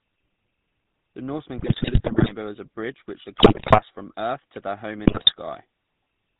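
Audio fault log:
throughout GSM full-rate codec: the speech has a buzzy, gravelly roughness and a dull top, with nothing above 4 kHz. At about 13 kbps the codec keeps only a crude model of the vocal tract and excites it with a sparse train of regularly spaced pulses, only every third excitation sample surviving. That coarse pulse excitation is what grinds into the voice, and the damage is plainly audible across the whole clip.
1.58–2.32 s, 3.36–3.82 s and 5.06–5.32 s GSM bit errors: the voice breaks up into squawks, pops and gargling, first just before "as a bridge over", then between "bridge over which the" and "from earth to their", and finally just after "earth to their home". Corrupted bits, at error rates of roughly 6 to 9 percent, garble the filter, pitch and gain values the decoder relies on, so frame after frame comes out with a bent spectrum or a sudden jump in level.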